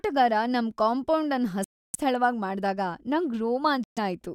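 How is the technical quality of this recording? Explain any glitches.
The speech is marred by two short holes. At 1.64 to 1.96 s, right after "ನಮ್ ಕಾಂಪೌಂಡ್ ಅನ್", and again at 3.84 to 3.98 s, the sound cuts to abrupt silence and resumes further along, as if it kept playing. This is likely a Bluetooth dropout: packets arrived too late and were discarded.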